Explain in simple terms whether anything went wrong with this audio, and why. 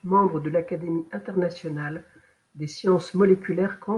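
Nothing went wrong: the speech runs without any dropout, glitch or distortion that a listener would notice.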